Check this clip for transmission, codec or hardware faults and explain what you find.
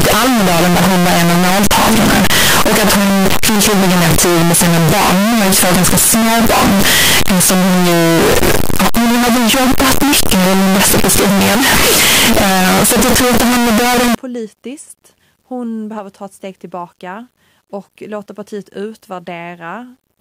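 One fault is present. From 0.0 to 14.1 s the speech is harsh, very loud distortion, with soft sounds as loud as strong ones, likely from a signed and unsigned mix-up in 8-bit samples. Each zero crossing becomes a full-range jump, so the waveform is a solid block and the spectrogram shows broadband smear.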